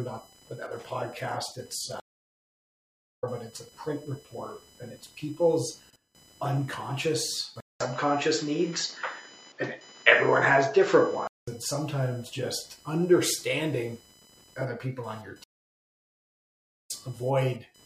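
Throughout the clip, load changes in the computer shift the audio circuit's shared ground. This computer activity noise is a faint buzzing chirp pulsing at roughly 1 kHz, sitting well below the sound at around 25 dB down. It follows the machine's activity rather than the audio.

At 2.0 s the connection drops and the player falls silent for 1.21 s. It then reconnects with a fresh decoder at 3.24 s. This stream reconnect resumes the audio about a second and a half further on, so a stretch of material is simply missing.

From 7.60 s to 11.47 s the input was likely switched to a poorer device. After a 200 ms gap, the sound turns dull, with nothing above 7.6 kHz. The level shifts by a few decibels and a new background noise appears, roughly 35 dB down.

A second stream reconnect begins at 15.44 s. The audio cuts out for 1.45 s and returns at 16.91 s, again skipped ahead by about one and a half seconds, with the intervening material lost.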